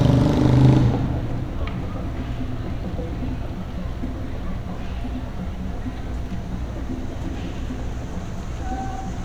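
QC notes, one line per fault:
No audible faults found; nothing to log.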